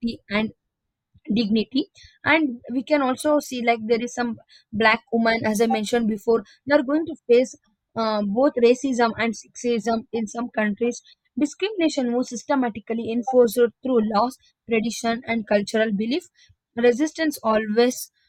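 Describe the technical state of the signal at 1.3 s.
The signal at 1.3 s is intact, with no audible fault at that moment.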